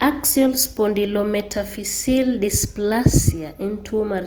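All the way through, the speech has a grainy, rough, noisy texture. That's likely Opus compression working in its music (CELT) mode at a low rate, something like 24 kbps, filling starved bands with noise. The top end still reaches about 20.1 kHz.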